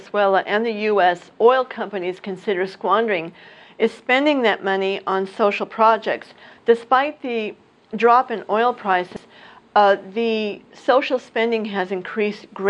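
Throughout, the sound is dull and gurgling, with upper sub-bands flickering on and off as patchy gaps on a spectrogram, likely from MP2 compression at a rate near 80 kbps.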